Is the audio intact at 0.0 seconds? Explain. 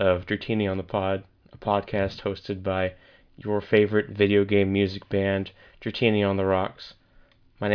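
Yes, the audio is intact at 0.0 seconds, with no fault present at that moment.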